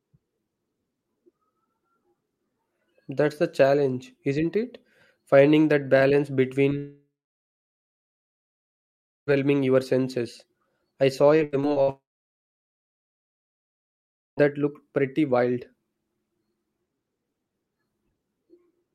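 At 6.77 s, just after "that balance", the speech cuts out in what sounds like a long network dropout, most likely a stall in packet delivery. The receiver stretches the last fragment into a brief fading buzz. Then there is about 2.2 s of silence. The audio resumes at 9.29 s with "your senses I saw", with roughly 2.5 s of the original missing.

From 11.37 s to 11.90 s, right after "your senses I saw", there is repeated packet loss that gives a robotic sound. Five short holes, the longest 82 ms, are each patched by extending the preceding sound. About a third of this half-second is concealed rather than real, so it comes across as choppy.

At 11.90 s the stream drops out completely in a second long network dropout, probably from a stall in packet delivery. A short concealment tail fades into about 2.4 s of silence. The audio returns at 14.39 s with "that looked pretty wild", and roughly 2.5 s of the original is never played.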